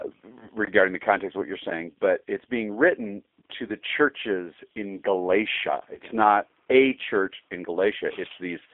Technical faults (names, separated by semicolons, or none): G.729 codec; VoIP packet loss concealed by the speech codec